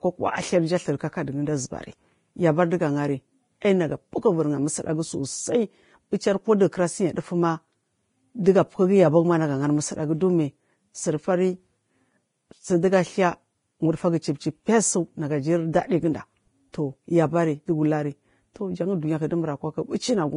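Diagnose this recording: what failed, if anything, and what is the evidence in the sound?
The failure sits at the codec stage. Throughout the speech there is heavy coding damage, with grainy, hissy treble and roughened tones, and nothing survives above 10.5 kHz. This is likely Vorbis compression at a low setting, and the damage fits a bitrate near 29 kbps. The coder kept a coarse spectral envelope and replaced fine high-frequency detail with noise of similar energy. On a spectrogram this appears as a flat ceiling at 10.5 kHz, with speckled, patchy energy below it instead of clean harmonics.

Pre-echo, from the same transform codec, occurs at 16.73 s. A brief hiss of about 14 ms arrives just ahead of a sharp attack, and the attack itself loses its crispness. Quantisation noise sized for the loud onset was spread across the whole transform block, so it also filled the quiet moment before the onset. 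On the waveform, low-level noise rises before the transient. On a spectrogram, a faint broadband smear extends leftward from the attack.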